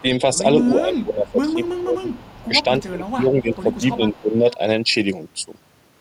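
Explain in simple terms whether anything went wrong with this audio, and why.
Yes, two things go wrong. First, the voice suddenly turns down between 0.75 and 2.08 seconds, and again between 2.47 and 4.45 seconds, for about a second in total within each stretch. The drop is deeper in the first stretch than in the second. This is speech suppressed in double talk. The likely cause is that both sides were talking at once, so the echo canceller mistook this voice for loudspeaker echo and turned it down.

Second, a quiet delayed copy of a voice trails behind the talking at 1.5 to 2.45 seconds, 3.0 to 3.11 seconds, 3.54 to 3.8 seconds and 4.13 to 4.54 seconds, arriving about a quarter of a second (275 milliseconds) late. The copy at 3.54 seconds is a little louder than the others. This is an echo leak. It likely happened because one side was on a loudspeaker and its echo canceller didn't remove everything its microphone picked up, so part of the sound went back down the line.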